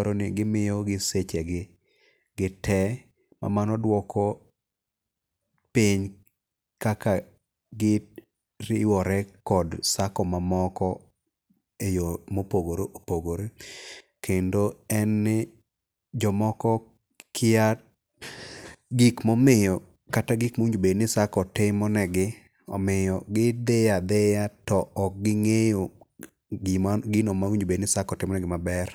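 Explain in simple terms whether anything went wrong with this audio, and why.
Nothing went wrong with this audio: there are no faults to explain anywhere in the recording.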